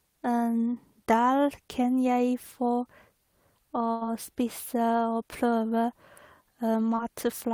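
At 3.91 to 4.03 s there is a burst of packet loss. About 100 ms of the call failed to arrive in time to be played, so the receiver covered roughly 96 ms of it by extending the last speech it had and letting that extension fade as the hole went on. You hear the speech stretch into a brief held, dimming sound before it picks up again further along, with the stretch in between simply gone.

Later, at 6.95 to 6.99 s, a short concealed packet loss occurs. Around 20 ms of audio missed the decoder, which filled about 17 ms by continuing the preceding sound from its own character and then blending back into the real signal. The repair is quick enough that it comes through as a momentary smear or wobble in the speech rather than an obvious break.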